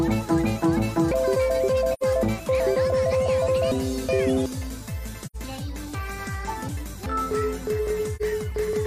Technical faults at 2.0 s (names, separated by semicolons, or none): chunks out of order; AAC frame loss with muting